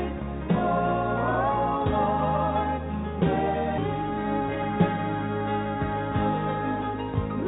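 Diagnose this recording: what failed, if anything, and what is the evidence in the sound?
At 3.78 s the sound jumps forward with no gap and no fill. About a second of material is missing, and the two sides are butted together almost directly. This is a skip ahead at the network and jitter-buffer stage. A backlog of audio had built up, and the receiver discarded the queued stretch to catch up. That cut the playout delay by roughly a second in one step.

From 3.88 s to 4.77 s the sound runs hurried, at about 113% speed, with its pitch unchanged. This is a jitter buffer speed-up, also at the buffer stage. Right after the skip the buffer still held more than its target. The receiver trimmed many short pieces, each one or a few pitch periods long, to drain the excess. In total that removed roughly 150 ms. The audio is band-limited to 4 kHz throughout, which fits the narrowband G.711 A-law codec on the call path.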